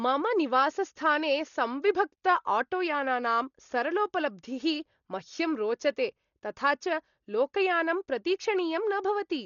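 Throughout the speech, the signal has likely passed through Dolby Digital compression at a very low rate, roughly what a 40 kbps stream would allow. Starved of bits, the encoder has cut the band so that nothing survives above 7 kHz, and many frequency lines carry no real detail, leaving the decoder to fill them with noise. The result is a dull, muffled sound with heavy damage: a rough, fluttering hiss clinging around voiced tones.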